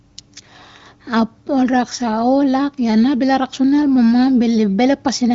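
No faults are audible: the speech has come through the AMR wideband (HD Voice) codec, with nothing above about 7.5 kHz and a clarity that points to one of its higher rates, around 23 kbit/s.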